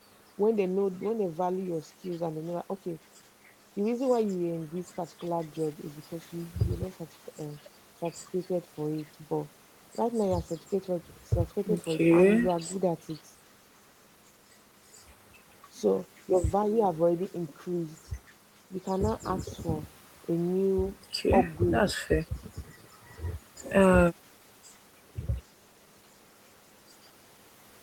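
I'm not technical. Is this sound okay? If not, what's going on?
Yes, this sound is okay, and nothing is going on that needs fixing.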